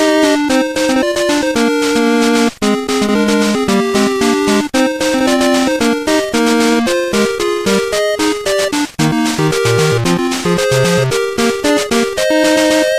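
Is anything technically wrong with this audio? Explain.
No, nothing technically wrong turns up on listening; the signal is intact and free of audible defects.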